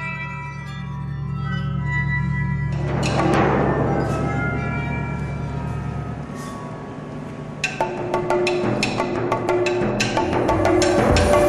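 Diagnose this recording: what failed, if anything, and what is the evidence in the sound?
Nothing in the recording stood out as a fault on listening.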